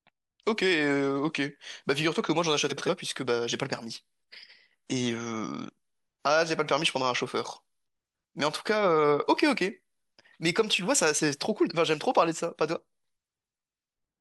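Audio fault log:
2.69–2.89 s, frames out of order: two adjacent 85 ms blocks were decoded swapped, so halves play exchanged, a garbled flutter.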